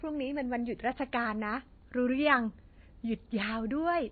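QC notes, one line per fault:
Throughout, MP3 compression: the speech has nothing above 4.6 kHz and a plainly audible watery, swirling texture. The likely cause is a heavy MP3 encode, which fits about 24 kbps. Short of bits, it cuts the treble and zeroes weak frequency lines frame by frame.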